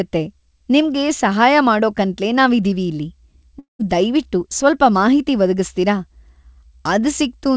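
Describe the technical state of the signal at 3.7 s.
At 3.7 s the signal is inside a long network dropout running from 3.59 to 3.82 s, a likely cause of what is heard. About 210 ms of speech never arrives. The receiver stretches the last sound into a buzz that fades over roughly 200 ms, leaving about 140 ms of silence. On a spectrogram, the harmonics smear into flat, repeating bands that dim to an empty patch below the 8 kHz G.722 ceiling, while the waveform decays to nearly flat.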